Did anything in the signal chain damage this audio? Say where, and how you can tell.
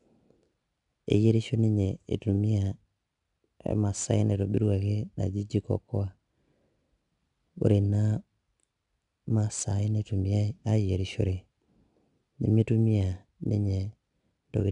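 Yes. 4-bit ADPCM compression at the codec stage, throughout the speech: a gritty hiss rides on every loud syllable and attacks distort, because each sample is coded as a coarse 4-bit step from a prediction. Nothing above 10.6 kHz suggests a rate around 89 kbps.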